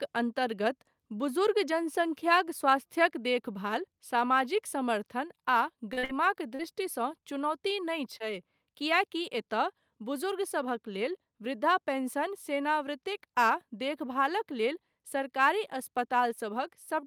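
At 3.06 s, just before "देखभाल सामाजिक", the speech and its background fall together by about 2 dB in a single step and stay there. This is a microphone volume stepped down, likely the call software cutting the device's input gain after judging the level too hot. The change is instantaneous, with no fade, so it reads as a sudden slight drop in loudness.

From 5.93 s the audio shows short concealed packet loss. Three consecutive gaps of 40 ms each, at 5.93, 5.99 and 6.05 s, run together into roughly 120 ms ending near 6.11 s. Another 40 ms gap follows at 6.55 s, then shorter 20 ms gaps at 7.21 and 8.18 s. In each case the receiver filled the hole by extending the preceding sound and then blending back, which is heard as brief smearing or wobble. The longest smear is in the run around 6.0 s.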